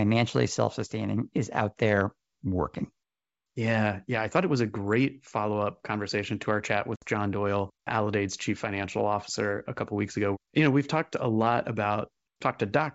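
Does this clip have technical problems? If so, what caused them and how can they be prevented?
Yes. Packet loss on an ADPCM call occurs at 6.96 to 7.05 s, right after "conversation to our chat": about 60 ms of audio, a few packets, drops to a hard-edged silence. The decoder's adaptive predictor and step size then no longer match the sender's, so the speech comes back disturbed until they resynchronise. To prevent this, carry the call over a network with enough headroom and jitter buffering, and use packet loss concealment that also resets the ADPCM decoder state after a gap.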